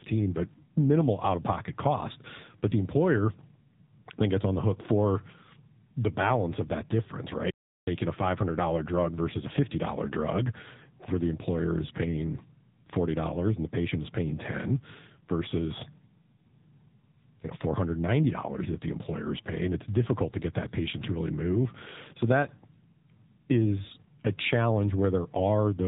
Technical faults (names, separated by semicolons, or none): AMR narrowband mobile codec